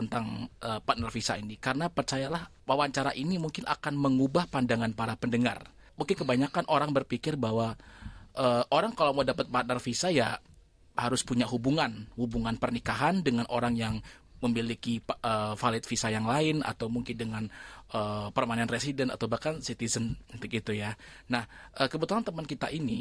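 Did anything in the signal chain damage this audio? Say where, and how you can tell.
No, nothing in the signal chain damaged this audio.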